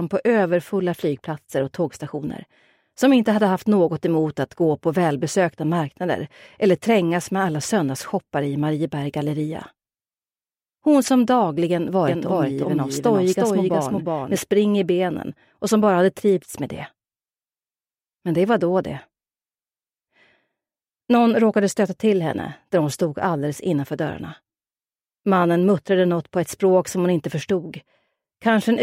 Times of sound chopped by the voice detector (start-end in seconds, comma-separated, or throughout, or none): none